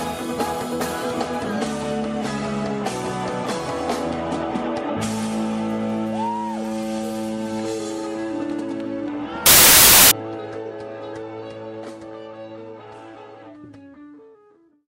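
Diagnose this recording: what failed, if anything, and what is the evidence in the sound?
A wrong sample width fault at the sample-format conversion stage runs from 9.46 to 10.11 s. The sound turns into loud, harsh noise with the original faintly buried inside it, and it runs 1.5 times too fast and high in pitch. That speed ratio points to 16-bit data being read as packed 24-bit. Each decoded value straddles mismatched bytes, so only fragments keep the real signal's top bits, and three bytes are consumed where two were meant.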